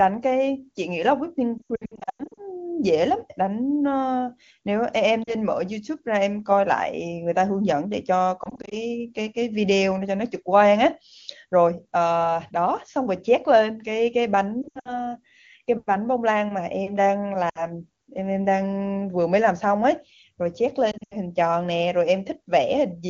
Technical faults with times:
1.58-2.42 lost AMR speech frames
5.23-5.35 lost AMR speech frames
8.43-8.77 lost AMR speech frames
14.62-15.06 lost AMR speech frames
17.49-17.63 lost AMR speech frames
20.91-21.17 lost AMR speech frames

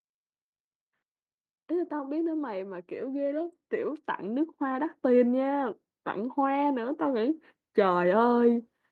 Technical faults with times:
1.69-5.75 automatic gain rising
6.34-8.91 automatic gain rising

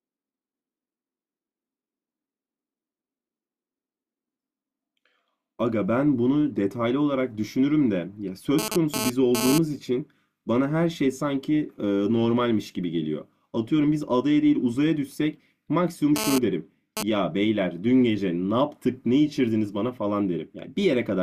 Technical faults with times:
8.59-9.58 GSM phone buzz
16.16-17.03 GSM phone buzz

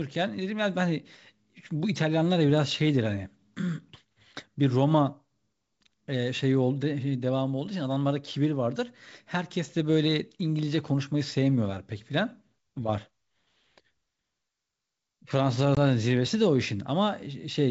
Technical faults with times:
15.75-15.78 packet loss on an ADPCM call

